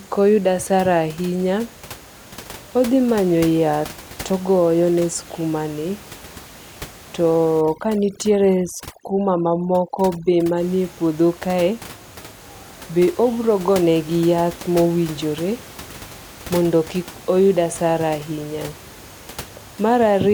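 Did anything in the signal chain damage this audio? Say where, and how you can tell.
Yes. Overdone noise removal appears from 7.6 to 10.6 s, at the call-processing stage. There the room noise, which sits about 20 dB below the speech elsewhere, collapses to near silence with twinkling specks. The suppressor is gating individual frequency bands hard whenever their level falls close to its noise estimate, so low-level parts of the speech are removed along with the background.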